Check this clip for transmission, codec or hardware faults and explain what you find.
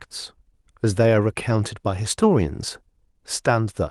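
Nothing turned up here; the speech comes across as a single unbroken stretch of audio, with no transmission, codec or hardware trouble to report.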